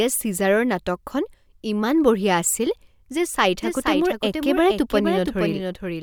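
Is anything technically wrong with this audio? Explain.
Yes. From 3.63 s, right after "আছিল যে চাই", to the end of the clip, the speech has a doubled audio track. A second full-band copy runs roughly half a second behind, around 5 dB quieter. This is likely a second capture through a slower path, or an edit that left two copies out of step. It differs from echo or reverberation because it appears abruptly, has no decay or room colour, and repeats only once.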